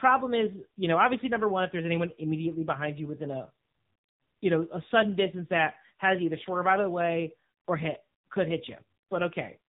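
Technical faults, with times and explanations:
Throughout, AMR narrowband mobile codec: the speech sounds boxed-in, buzzy and synthetic, with nothing above 4 kHz. The heavy damage points to a low bitrate around 6.7 kbit/s, where a vocal-tract model driven by sparse pulses per 5 ms stands in for the real voice.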